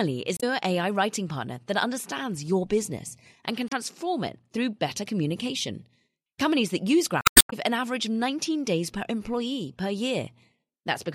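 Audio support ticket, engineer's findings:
Damaged data in the compressed stream: short glitch bursts at 0.35–0.43 s, 3.68–3.74 s (after "your business and can", before "it through better communication") and 7.21–7.53 s (after "that use"). Decoder's hitting corrupt frames, losing sync and hunting for the next header.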